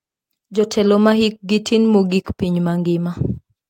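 No technical faults are audible.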